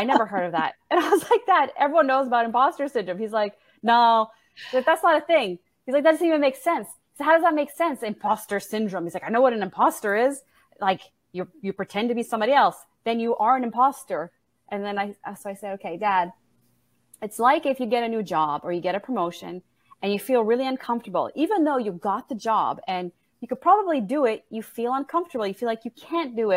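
No technical faults can be heard anywhere in the recording; the signal holds steady without interruption or disturbance throughout.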